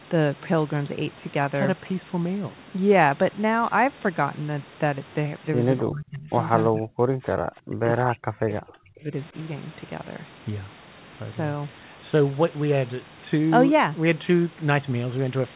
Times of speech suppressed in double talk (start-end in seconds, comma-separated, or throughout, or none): 5.82-6.31, 6.69-6.99, 7.65-9.35